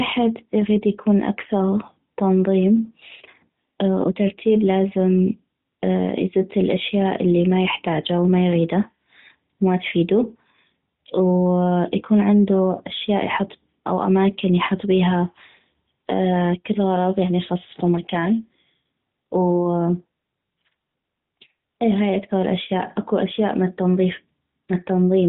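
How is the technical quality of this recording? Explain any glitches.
No glitches: the speech runs through an AMR narrowband mobile codec path with nothing above 4 kHz and only light coding texture, which fits the 12.2 kbps mode, and no dropouts, clicks or level faults occur anywhere in it.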